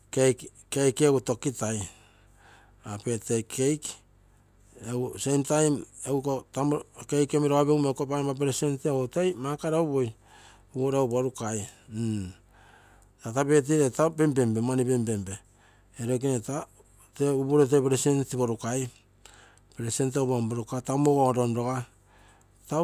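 No technical faults can be heard anywhere in the recording.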